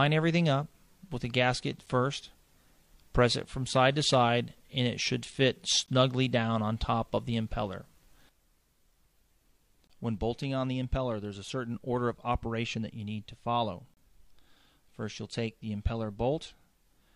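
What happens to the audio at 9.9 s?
A brief hole of silence with hard edges cuts into the sound from 9.87 to 9.90 s, about 23 ms long. This is a gap between stream segments: two segments' timestamps don't quite meet, likely at a 4-second segment boundary, and the player pads the space with silence without losing any audio.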